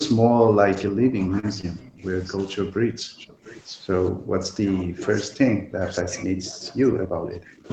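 Speech suppressed in double talk hits the speech from 0.09 to 2.03 s, 2.37 to 3.45 s, 4.11 to 4.40 s, 4.59 to 5.08 s, 5.28 to 5.86 s and 6.04 to 7.68 s. The level dips by up to about 30 dB, most likely because the echo canceller mistook overlapping talk for echo and turned everything down. Short stalls from a late packet occur at 1.39 to 1.46 s and 1.61 to 1.66 s. In each, the receiver held the last sound for 37 ms and then 21 ms while waiting, so nothing is lost but the audio briefly drags. An echo leak appears at 3.19 to 3.24 s as a faint copy delayed by 248 ms, about 35 dB below the speech, likely residue the echo canceller failed to remove. Throughout, the sound stops at 8 kHz, which is normal for this call path.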